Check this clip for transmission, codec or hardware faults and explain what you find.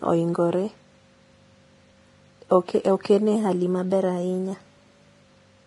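Two problems stand out: heavy codec damage across the whole speech clip, and a sudden pitch-and-speed jump near the end.

Vorbis compression, throughout: nothing comes through above 10.6 kHz, and the treble sounds hissy and grainy, with softened consonant attacks. That's likely a low-quality Vorbis encode, probably around 30 kbps, where fine high-frequency detail is quantised so coarsely it turns into noise.

Drift correction step, 3.36 to 5.22 s: the speech suddenly runs about 6.1% faster and sits roughly a semitone sharp (about 103 cents), then snaps back. Likely clock-matching software changed the playback rate in one step to bring its buffer back into line.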